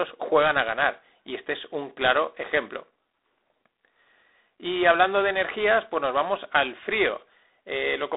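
Speech throughout with G.726 ADPCM coding: nothing above 3.9 kHz, and a harsh, rasping hiss tracking the level, which fits 24 kbit/s.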